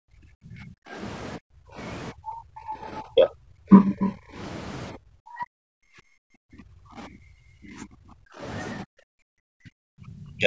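A doubled audio track runs throughout: the speech is heard twice, a second copy trailing about 300 ms behind at around 5 dB lower, dry and full-band with no room colour. It is likely a second capture arriving through a slower path.

Speech suppressed in double talk appears at 0 to 0.96 s, 1.38 to 1.8 s, 2.12 to 4.39 s, 4.92 to 8.42 s and 8.82 to 10.46 s. The speech dips sharply, by roughly 40 dB at its deepest and closer to 30 dB in the third stretch. This is likely an echo canceller that could not tell the talker from loudspeaker echo while both sides spoke, so it turned everything down. The call microphone processing leaves nothing above 8 kHz.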